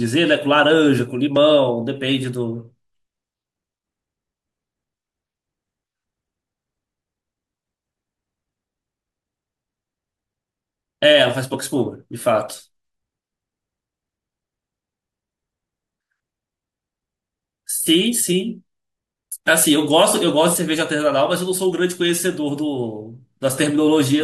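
No technical faults can be heard anywhere in this speech recording.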